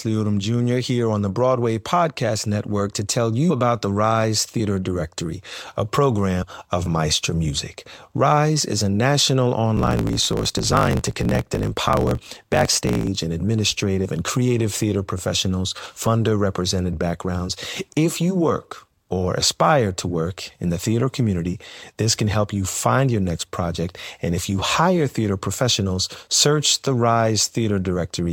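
At 6.41 s, compressed frames are skipped: about four frames are lost, so the speech jumps ahead by roughly a tenth of a second. The join shows as a waveform discontinuity.

From 9.75 s to 13.09 s, a block size mismatch truncates each block, which fits 1024-sample blocks being cut short. A 50 Hz buzz results, and the speech runs 1.16 times faster at near-normal pitch. The spectrogram shows vertical striations every 20 ms and compressed syllables.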